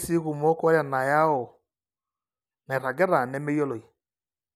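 No technical faults can be heard anywhere in the speech; the signal holds steady from the first moment to the last.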